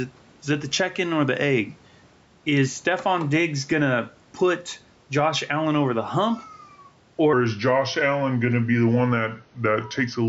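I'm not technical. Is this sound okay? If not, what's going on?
No. Gain pumping runs through the whole clip. The recording level was most likely set far too high, so an automatic limiter keeps pulling it down whenever the speech gets loud. The speech sounds squashed.

From 7.33 s to the end, at about 10.28 s, there is a section at the wrong speed. That stretch plays at roughly 0.85 times its proper speed, most likely because it was fitted to the wrong clock. The speech becomes slower and about three semitones deeper.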